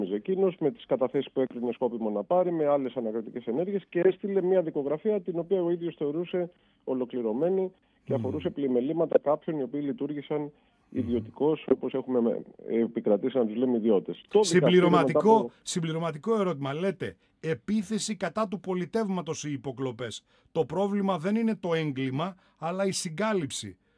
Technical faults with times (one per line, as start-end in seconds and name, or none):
none